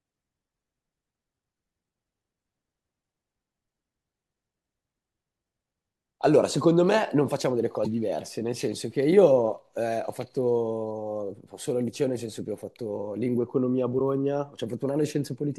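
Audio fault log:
13.98–14.01 s, broken MP3 bit reservoir: speech jumps ahead in a 30 ms glitch, likely after a cut frame left the next reading stray bytes.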